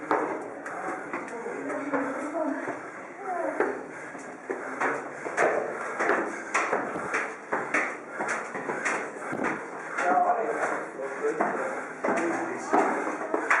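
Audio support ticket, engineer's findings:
Nothing to flag on this one: no audible faults turned up anywhere in the recording, so there's no symptom or component to chase.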